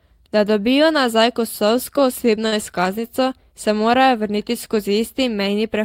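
At 2.47 to 2.55 s, between "dobijo nazaj kosovsko" and "izkaznico se morajo vrniti", there is a short stall from a late packet. The jitter buffer ran dry, so the last sound was stretched 46 ms, adding delay without losing speech. A spectrogram shows flat smeared bands, and the waveform shows a repeating, unchanging stretch.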